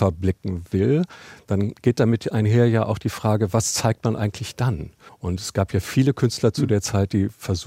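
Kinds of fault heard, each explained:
No technical fault can be heard anywhere in the speech; the signal stays steady and intact throughout.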